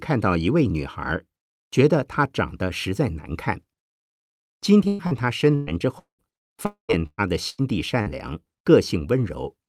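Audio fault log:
4.87–8.09 s: repeated packet loss (robotic sound). The speech breaks up in nine separate gaps over this span, the longest about 0.2 s. Each gap is covered by stretching out the last received sound, so roughly 0.87 s of the passage, about 27 percent, is synthetic fill instead of real speech. Because the holes follow one another so closely, the repeated fills give the passage a choppy, robotic quality, with pieces of speech missing.
6.66–7.00 s: long network dropout, falling inside the choppy stretch above. The speech gives way to a continuation of the last sound lasting about 0.23 s, which fades and is followed by roughly 0.12 s of silence before the speech resumes with that portion missing. This pattern, a fading extension of the final received sound, then silence, then a jump forward, is likely the result of a sustained break in the incoming stream, longer than a single lost packet.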